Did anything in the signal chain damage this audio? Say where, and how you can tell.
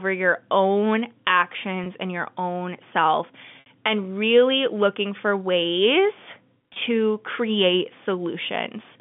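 Yes. Network packet loss with pitch repetition at 1.84, 3.60–3.66 and 6.74–6.76 s: the two short gaps are bridged by a repeated, buzzy pitch period, while the longer gap at 3.60 s fades into silence before speech returns with a short cross-fade.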